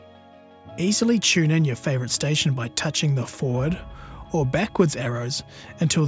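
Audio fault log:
No faults are audible across the whole clip.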